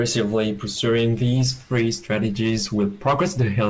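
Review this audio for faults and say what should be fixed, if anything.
Nothing stood out on listening to this speech clip, so there is nothing here that needs fixing.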